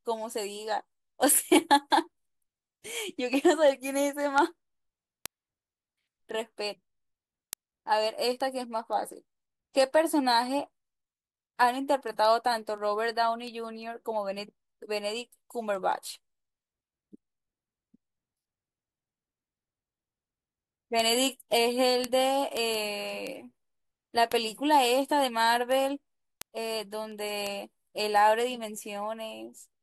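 Word clock ticks run through the speech from 0.18 s to 29.74 s, arriving about five times a second, roughly 150 in all. The receiving device is free-running rather than locked to the sender's clock, drifting by something like 100 parts per million. Each time the two clocks slip past one another, a single sample is dropped or doubled, producing a sharp tick that keeps a steady rhythm but varies in strength from one to the next.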